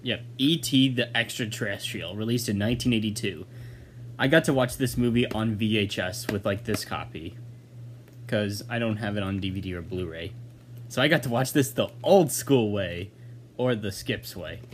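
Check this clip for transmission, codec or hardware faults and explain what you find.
Nothing faulty can be heard anywhere in this recording.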